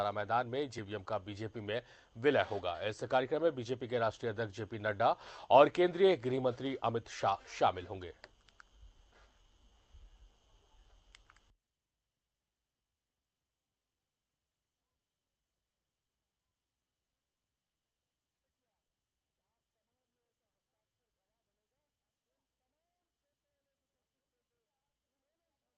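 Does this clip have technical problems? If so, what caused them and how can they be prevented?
No, nothing here needs fixing: the audio just carries the narrower, call-style sound you'd expect from a call path, with the top end stopping around 8 kHz, which fits a typical Opus call setting.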